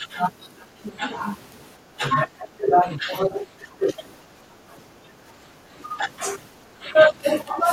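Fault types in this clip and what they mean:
Speech suppressed in double talk: the speech level dips in several brief patches and one long stretch from 2.38 to 3.91 s, falling by up to about 25 dB. The likely cause is an echo canceller turning down overlapping talk. The waveform envelope shows notches, and the spectrogram shows energy thinning across bands.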